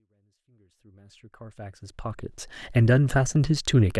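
No technical faults can be heard in the speech, which begins with a smooth, editor-style fade in from silence that reaches full level at about 2.4 s without any click or hard edge.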